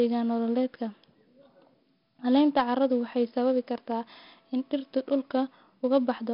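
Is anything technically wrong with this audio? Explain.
Yes. Throughout the speech there is 4-bit ADPCM compression. Each sample is coded as a coarse 4-bit step from a prediction, leaving a gritty hiss that rides on every loud syllable and roughens sharp onsets. Nothing above 5.3 kHz remains, which fits a low sample rate near 11 kHz and a rate of about 44 kbps, so the sound is also dull.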